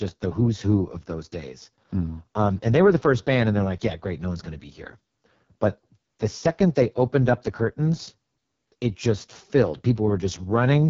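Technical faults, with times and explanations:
Throughout, AMR wideband (HD Voice) codec: the speech has a rough, raspy, buzzy texture with nothing above about 7.5 kHz. This codec rebuilds speech from a coarse model of the vocal tract driven by pulses and fills the top band with noise. When too few bits describe those pulses, the voicing turns grainy and harsh. Damage this heavy fits the codec's lowest mode, 6.6 kbit/s.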